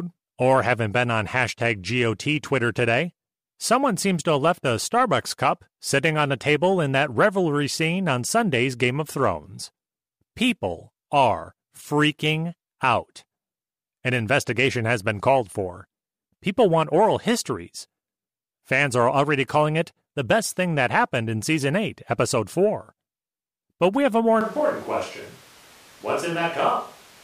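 At 24.41 s the speech abruptly turns roomy and hollow and stays that way to the end. The low end thins out, the level falls by roughly 5 dB, and background room noise comes up to sit around 25 dB below the speech. The sudden change in tone points to a switch to a distant microphone, likely because the close microphone's feed dropped out and a farther pickup took over.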